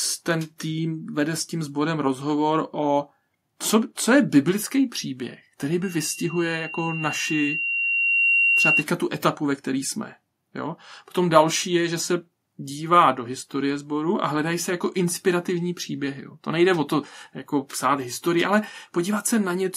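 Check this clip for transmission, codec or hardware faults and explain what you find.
The speech has loudspeaker feedback squeal. It runs from 5.83 to 8.85 s, starting just after "je biblický příběh který" and ending before "tu etapu ve které". A microphone picked up the loudspeaker it was feeding. At about 2.8 kHz the loop gain rose above one, so that frequency fed on itself. It swells over roughly three seconds into a piercing whistle. At its peak it sits about 5 dB above the speech.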